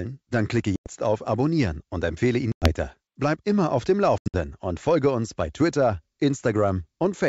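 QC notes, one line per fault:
0.76–0.90 s, packet loss on an ADPCM call: about 100 ms of sound drops to hard digital silence, a clean vertical gap on the spectrogram and a flat line in the waveform, probably a handful of packets. When the sound resumes, the decoder's predictor and step size no longer match the sender's, so it comes back slightly distorted and settles within tens of milliseconds.
2.52–2.72 s, packet loss on an ADPCM call: the same fault repeats, with about 100 ms lost as a sharp-edged silent hole. The restart is again marked by slight distortion while the decoder re-converges.
4.18–4.36 s, packet loss on an ADPCM call: here about 140 ms is lost in scattered pieces over roughly 160 ms, the longest run being 80 ms. The spectrogram shows several short gaps instead of one block, as the wideband signal stutters back.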